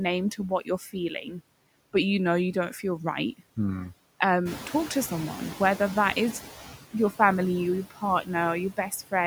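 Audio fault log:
throughout: noise suppressor artifacts. The suppressor pulls the background down by about 17 dB, frame by frame. It treats each frequency band it judges to be steady noise on its own. So the noise sinks in the gaps and rises again under the speech.
0.37 to 1.41 s and 7.90 to 8.03 s: speech cut by the noise suppressor. In these stretches the suppressor mistakes parts of the speech for noise. It turns them down with the background. The first stretch dips by up to about 14 dB and touches around 300 ms of sound in total. The second is brief, around 100 ms, and dips by up to about 15 dB. The affected parts sound swallowed and faint. Quiet, noise-like parts fall most easily below the suppressor's threshold.
4.45 to 6.64 s: noise suppressor catching up. Around 4.5 s the room noise jumps by about 11 dB. It then sits about 14 dB below the speech. The suppressor's noise estimate lags behind this rise. 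So the louder noise first comes through with too little reduction. Over 2.19 s the estimate adapts, and the noise sinks by about 10 dB. The background swells and then slowly pulls back. It does not hold steady.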